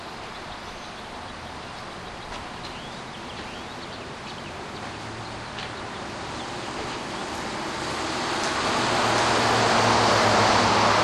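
A second copy of the audio was likely mixed in, either captured again through a slower path or left in by an edit holding two copies out of step, producing a doubled audio track in this sound recording from 8.64 s to the end. The duplicate trails the original by a fixed delay of roughly 0.7 s at about the same level, full-band and without decay or room colour, and it cuts in abruptly at 8.64 s.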